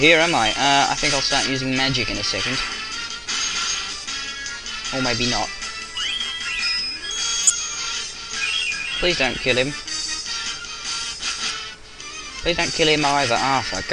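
Around 7.44 to 7.51 s there's a short burst, roughly 70 ms long, that's a clear case of a corrupt frame decoded. Bits in a compressed frame or two got flipped, and the decoder played them anyway. The misread gains and codes threw energy into the wrong frequencies for about the length of those frames, so you get a chirpy blip before the audio carries on.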